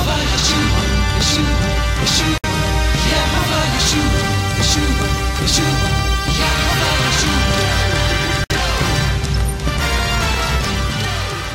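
At 2.38 to 2.44 s and again at 8.44 to 8.50 s, the sound drops out for about 60 ms and then resumes exactly where it left off: a gap at a join of encoded pieces. Each piece was encoded on its own, and the encoder's start-up silence and final-frame padding were kept when they were joined. The 6.0 s spacing separates this from a network dropout, whose gaps fall irregularly, and nothing is lost or repeated across the smeared edges.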